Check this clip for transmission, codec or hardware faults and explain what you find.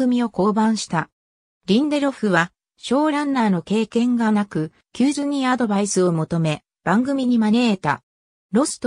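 No transmission, codec or hardware fault can be heard anywhere in the clip, and the signal stays continuous and stable throughout.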